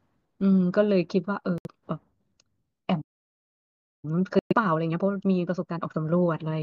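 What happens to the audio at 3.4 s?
At 3.4 s the audio is inside a playback stall that runs from 3.01 s to 4.05 s. The speech cuts out mid-flow and the output stays silent for about 1.02 s before sound returns. A gap of this kind most likely comes from the player's buffer running dry, or its output thread being blocked, so nothing reaches the output until the data supply recovers.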